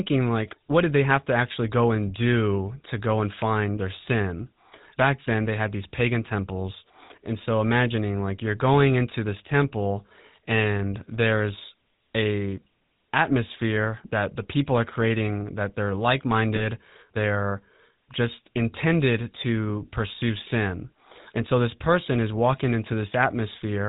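From the very start, the whole recording carries the GSM full-rate codec, and it's plainly audible. The voice has that gravelly, buzzy grain you get when a coder models the vocal tract and then drives it with a sparse, regularly spaced pulse train instead of the real excitation. Nothing comes through above 4 kHz, so the top end sounds dull and boxed-in. It's the character you'd expect from the 13 kbps full-rate coder.

Then, from 16.56 to 16.66 s, there's a brief rough, metallic ring where the sound just hangs instead of moving on. That's lost GSM frames. The decoder had nothing valid to play, so it reused the parameters from the last good frame and the voice momentarily freezes into that tinny smear. It's over quickly, which fits a single dropped frame of around 20 ms being concealed.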